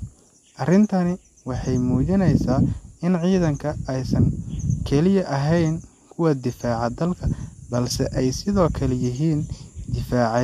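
No technical faults can be heard anywhere here.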